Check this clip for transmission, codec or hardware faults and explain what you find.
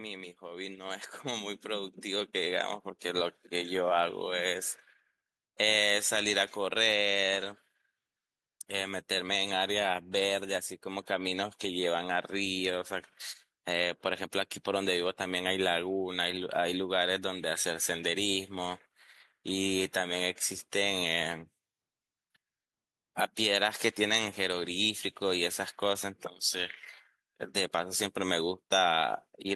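One fault shows up: automatic gain rising, 0.4 to 3.8 s. The gain control judged the input too quiet and ramped up about 11 dB, so the background noise swells with the speech, unlike a talker simply getting louder.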